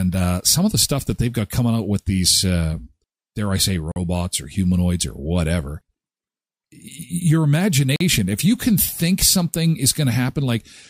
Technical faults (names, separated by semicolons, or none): gap between chunks